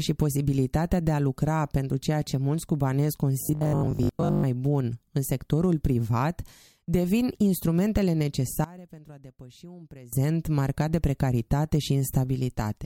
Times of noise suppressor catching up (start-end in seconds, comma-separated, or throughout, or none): none